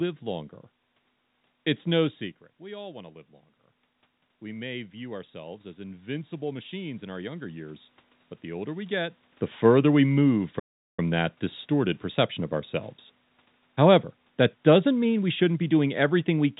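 A speech recording carried over a call path whose G.711 mu-law coding leaves nothing above 4 kHz, with three faults. From 4.4 to 7.9 s, automatic gain rising: the input level fell by about 13 dB and the gain control responded by raising its gain by about 8 dB over three and a half seconds, so voice and room noise swell together until just before "but the older we". At 10.59 s, a playback stall: the output goes silent for about 390 ms, from just after "the further we move" until "that distorted perception of" resumes, most likely because the player ran short of data or its thread was held up. From 13.75 s to the end, automatic gain falling: the gain control judged the input too loud or its background noise too strong and pulled its gain down steadily, so the speech sinks along with its background.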